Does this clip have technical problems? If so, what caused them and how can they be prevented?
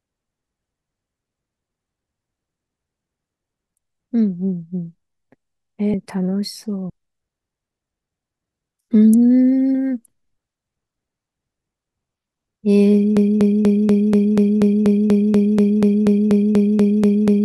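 Yes. Compressed frames skipped at 5.94, 6.90 and 9.74 s: the speech jumps ahead by roughly a third, then a sixth, then a sixth of a second. Prevent this by checking the file's integrity and using error-resilient transport.

A broken-record loop runs from 13.17 s to the end: one 242 ms piece repeats exactly 18 times. Unlike echo or stutter, the repeats are identical. This was likely a stalled player or stream. Prevent it with stall detection that mutes or resyncs instead of resending the last buffer.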